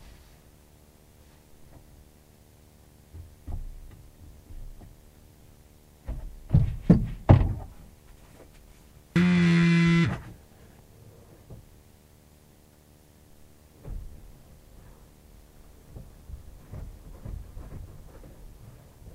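From the very start and right through to the end, there's a video or display buzz: a screen or its cable is coupling into the audio, giving a steady 75 Hz buzz at the picture's field rate with hash on top, sitting well below the main sound, about 35 dB down.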